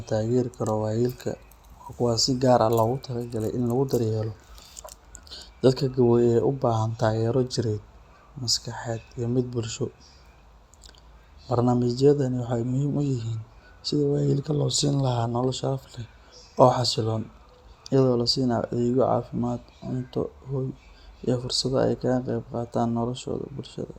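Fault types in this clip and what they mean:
No technical fault can be heard anywhere in the signal.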